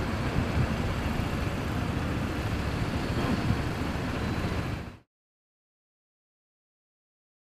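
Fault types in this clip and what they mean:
Nothing stood out on listening to these sounds, which ease away in a smooth fade-out over roughly the last half-second before about 5.1 s.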